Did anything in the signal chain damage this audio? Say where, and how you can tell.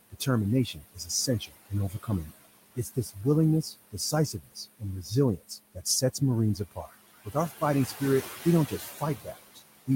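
Yes. The damage happens at the call-processing stage, where noise suppressor artifacts run through the whole clip. The suppressor pulls down every band it judges to be steady noise by about 18 dB, frame by frame. The room noise, which sits about 15 dB below the speech, therefore drops away in the gaps and returns under each phrase.

The same suppressor also produces speech cut by the noise suppressor. It mistakes parts of the talker for noise and turns them down along with the background. This happens at 0.73–2.34 s and 3.62–6.21 s, each with about half a second lost and drops of about 20 dB. It also happens at 2.75–3.17 s, 6.55–6.92 s and 7.25–7.62 s, where the drops are about 13 to 18 dB, and from 8.45 s to the end. Soft consonants and word endings sound swallowed.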